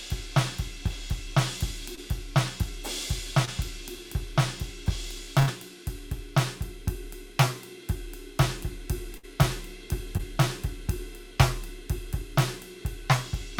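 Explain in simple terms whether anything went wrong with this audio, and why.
Three brief smears or wobbles in the music, at 1.95, 3.45 and 10.17 seconds, are short concealed packet loss. About 20 ms of sound arrived too late, and the player bridged each gap by continuing the previous sound.

Two longer dropouts, at 5.39 to 5.49 seconds and 9.17 to 9.25 seconds, are bursts of packet loss. The music turns into a fading continuation of the last sound, then picks up further along. Roughly 80 ms and 60 ms of the music are simply gone.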